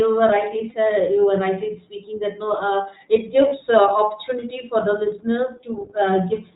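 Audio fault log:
throughout iLBC codec: The speech runs through the narrowband iLBC codec, which codes each 20 ms frame's excitation on its own and passes nothing above 4 kHz. The damage is plainly audible as a muffled, slightly rough, synthetic quality, consistent with iLBC's 15.2 kbps mode.
0.70–0.73 s and 3.48–3.54 s lost iLBC frames: Packets went missing, and the decoder bridged each gap by repeating the last pitch cycle blended with noise, heard as a brief held, buzzy vowel. The first, just before "you were rightly speaking", fits one lost 20 ms frame, the second about two. Speech snaps back almost immediately.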